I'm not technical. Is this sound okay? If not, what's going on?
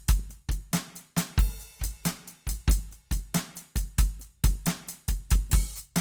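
No, not quite. All the way through this bit of music, the tones come across rough and grainy, with a noisy, sandpapery texture where they should sound smooth. That's Opus compression, the likely cause: the file was squeezed hard, so where the encoder ran short of detail it patched the gaps with borrowed or noise-like sound. The top end stays bright rather than muffled, but the graininess is easy to hear from start to finish.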